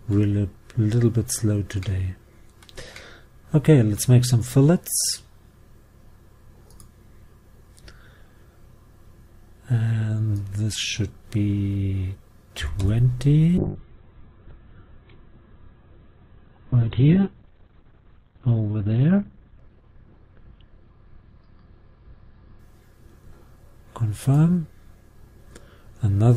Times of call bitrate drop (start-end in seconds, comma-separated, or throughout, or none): 13.58-22.91